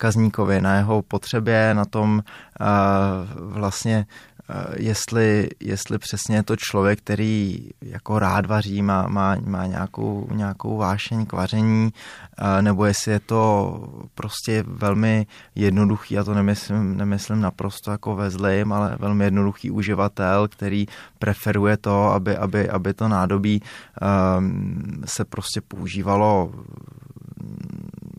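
No technical faults are audible.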